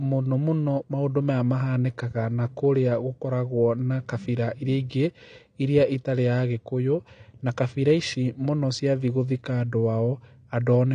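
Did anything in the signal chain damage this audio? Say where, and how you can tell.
Yes. The damage sits at the codec stage and runs through the whole clip. Nothing reaches above 9.7 kHz, so the speech sounds dull. Sibilants and sustained sounds carry a fizzy, warbling texture, and the codec damage is plainly audible. This is likely AAC compression, AAC-LC at a low rate, which fits about 32 kbps. At that rate the encoder lowers its cut-off and coarsely quantises each frame's spectral lines, leaving holes and smearing.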